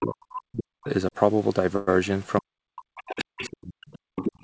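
A speech clip in which the talker keeps dipping and a second voice faintly bleeds in. The other side's voice leaking through shows up as scraps at 0.00–0.06 s, 2.96–3.54 s and 3.87–3.99 s, sitting roughly 20 to 30 dB under the talker. It returns more strongly at 4.15–4.32 s, only around 10 dB down. That pattern points to a loudspeaker on the talker's device whose output the echo canceller likely failed to fully subtract from the microphone.

From 0.00 to 0.88 s and again from 2.41 to 3.89 s the talker's level sinks, at worst by something like 40 dB, for about a second and then about one and a half seconds in total. The talker sounds pumped down while the far end is active. This is speech suppressed in double talk: with both parties talking at once, the canceller likely could not tell the local voice from the echo and attenuated everything.

At 1.76–1.89 s the sound stalls and the last moment is stretched into a brief fading fill for 110 ms. 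Then it picks up exactly where it left off with nothing lost, only later. That is a call audio freeze, likely from late packets draining the jitter buffer so the receiver had to fill the wait.

From 4.32 s to the end, right after the loudest leak, the room tone ducks by about 21 dB for roughly a tenth of a second. This is background gated by the echo canceller, clamping the microphone while the loudspeaker played. The band stops at 8 kHz, which fits a wideband call codec such as G.722 at 64 kbps.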